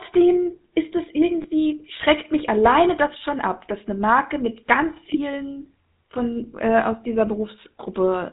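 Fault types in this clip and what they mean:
GSM full-rate codec, throughout: the voice carries a plainly audible buzzy, gravelly roughness and nothing above 4 kHz, which fits the 13 kbps full-rate mode. The codec models the vocal tract and excites it with sparse, regularly spaced pulses, discarding most excitation detail.
Lost GSM frames, at 1.42 to 1.46 s and 5.14 to 5.20 s: each gap sounds like a brief rough, metallic ring, consistent with a single 20 ms frame missing. The decoder fills it by repeating the last good frame's settings, holding the sound instead of resuming cleanly.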